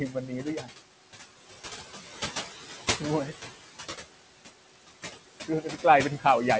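A speech recording carried over a call link, with noise suppressor artifacts throughout: the background, sitting about 11 dB below the speech, is pulled down by roughly 15 dB in pauses and rises under speech. On a spectrogram this shows as a patchy, blotchy noise floor that flickers frame by frame, with nothing above 8 kHz, consistent with the G.722 codec's band limit. Between 0.1 and 0.68 s there is speech cut by the noise suppressor, which misjudged quieter speech as noise and attenuated it by up to about 9 dB across roughly a fifth of a second in total, so soft sounds come out swallowed. The waveform shows shrunken, dipped envelope segments there, and the spectrogram shows faded low-energy detail.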